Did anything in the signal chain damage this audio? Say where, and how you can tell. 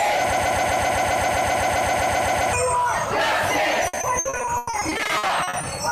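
Yes. From 0.33 to 2.53 s a broken-record loop takes over: one 130 ms fragment plays back to back, 17 times, identically, so the sound that should have continued is simply gone. This likely points to a stall at the playback or streaming buffer, which kept resending the last block it held. Unlike packet loss, the repeats are perfectly uniform and unbroken, with no choppy holes between them.

From 3.87 to 5.65 s there is repeated packet loss with a robotic sound, a network-stage fault. About twenty short dropouts, none longer than 100 ms, are each patched by stretching the preceding sound. Roughly 0.7 s of the span is concealed this way, close to 40 percent, which gives a choppy, stuttering texture. It differs from the loop because the patches are varied rather than one fragment recurring exactly.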